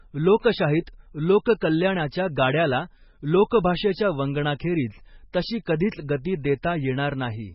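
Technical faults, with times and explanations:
Throughout: MP3 compression, likely at a very low bitrate. The damage is heavy and fits a rate around 16 kbps. Nothing remains above 5.6 kHz, so the speech sounds dull and muffled. With so few bits, the encoder drops weak frequency lines. Those lines flicker on and off from frame to frame, giving a watery, swirling texture. The sharp starts of sounds are smeared, because each frame's coarse coding spreads them out in time.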